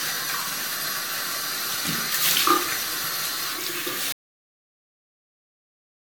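From the very start the sound has a swirly, smeared, hollow quality, with blurred attacks and nothing above 20 kHz. That's generation loss. It fits something like 96 kbit/s AAC-LC, likely re-encoded around ten times, each pass stacking fresh quantisation noise and spectral holes.

At 4.12 s it cuts to silence, with no room tone at all, and stays silent to the end. That's an audio dropout to silence, likely the input being lost while the recorder kept writing silence.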